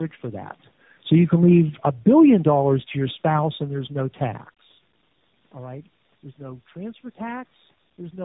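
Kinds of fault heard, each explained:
tandem speech coding: The speech has been decoded and re-encoded across several links in a row, each coder working on the previous one's already damaged output. It is band-limited with nothing above 3.8 kHz, and the roughness, muffling and warble are heavier than any single narrowband codec produces, which fits about three speech codecs in series. A single low-bitrate codec leaves one uniform layer of artefacts. Here the distortion sounds stacked and compounded.
automatic gain falling: From 0.97 s to 2.42 s the level sinks gradually by about 8 dB as the gain control pulls back on input it judged too loud or too noisy for its starting gain. The room background drops along with the speech, and that separates it from a talker moving relative to the microphone, as happens around 0.5 s and 4.5 s, where only the voice changes and the room noise holds steady.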